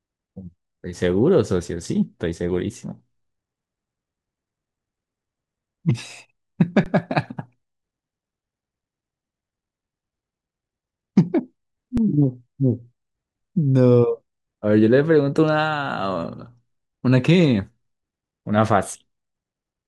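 Speech with two underruns with held sample, from 6.84 to 6.86 s and at 11.97 s. Both times the output buffer ran dry and the converter held its last value, so the waveform goes flat and the sound stops dead for 20 ms, then 5 ms. That much live audio was lost each time, seen on a spectrogram as a thin blank gap.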